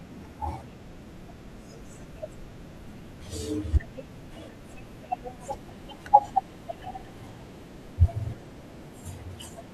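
From 5.46 s right through to the end at 9.74 s, there's a section at the wrong speed: the speech suddenly runs about 1.12 times faster than it should, and because speed and pitch move together, the voice jumps up by roughly two semitones and sounds a bit rushed and chirpy. The shift happens abruptly, not gradually. The likely cause is that this stretch got played back or rendered against the wrong clock rate.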